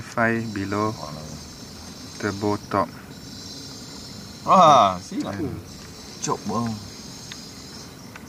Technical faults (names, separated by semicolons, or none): none